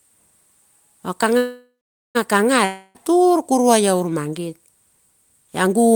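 A call audio freeze runs from 1.37 to 2.17 s in this speech recording: the last sound is stretched into a fading buzz that sinks to silence for about 0.44 s. Packets were likely held up until the jitter buffer ran dry, so resumption picks up exactly where it stopped, adding about 0.78 s of delay but losing nothing. A long network dropout follows from 2.65 to 2.97 s, where about 0.3 s of fading fill covers audio that never arrived, likely from a burst of lost packets. About 0.3 s of speech is missing, and the sound returns just before "tur kuruai".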